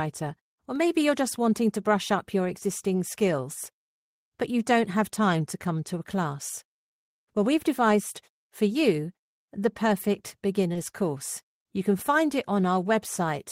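At 10.73 to 10.77 s, just after "for you the perfect", the speech shows a short concealed packet loss. About 20 ms of audio failed to reach the decoder in time, and the receiver covered the gap with 20 ms of synthesized sound, extending the preceding signal before crossfading back into the real stream. The result is a fleeting smear in the speech, a wobble where the continuation briefly stands in for what was lost.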